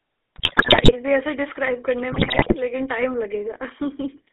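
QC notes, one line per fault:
Throughout, GSM full-rate codec: the speech passes through a full-rate GSM coder, consistent with 13 kbps, which rebuilds the vocal tract from coarse pulse excitation inside a 300 Hz to 3.4 kHz band, leaving a clearly audible buzzy, gravelly roughness over thin, band-limited speech.
0.36–0.93 s and 2.12–2.56 s, GSM bit errors: corrupted bits reach the decoder across runs of consecutive frames, fitting an error rate near 8%. Damaged filter, pitch and gain values distort the spectrum and level frame by frame, so the speech breaks into squawks, pops and gargling.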